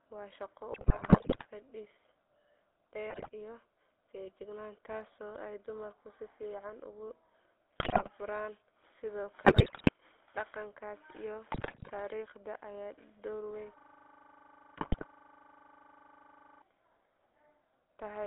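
GSM full-rate codec coding runs through the whole speech clip. The band is held to roughly 300 Hz to 3.6 kHz, and the voice has the plainly audible buzzy, gravelly grain of pulse-excited vocal-tract modelling, which fits a 13 kbps full-rate channel.

GSM bit errors break through at 0.72 to 1.46 s, 3.10 to 3.30 s, 7.78 to 8.10 s, 9.44 to 9.89 s and 11.52 to 11.91 s, with a final burst at 14.76 to 15.05 s. Corrupted filter, pitch and gain parameters reach the decoder, so the voice squawks, pops and gargles in those stretches. The 3.1 s burst is the densest, at roughly 9 percent of bits flipped.

A system hang loop runs from 13.79 to 16.62 s. Playback froze while the hardware kept replaying one 40 ms slice of the ring buffer, repeating it dozens of times. It is heard as a rigid 25 Hz buzz-stutter, and the 14.76 s bit-error garble is caught inside it.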